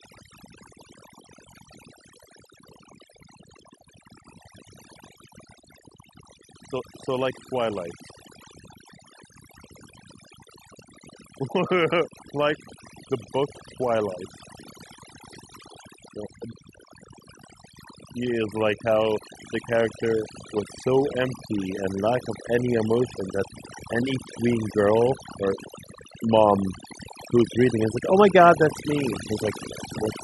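Overdone noise removal runs through the whole speech clip: the suppressor clamps bands sitting near its noise estimate, so the background drops and breaks up into twinkly specks. Then from 18.17 to 23.19 s there's automatic gain rising, where the gain control decides the input's too quiet and slowly lifts everything, voice and background together, by about 5 dB.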